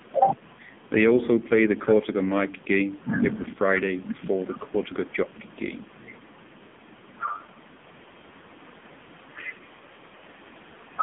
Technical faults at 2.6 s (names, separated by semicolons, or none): AMR narrowband mobile codec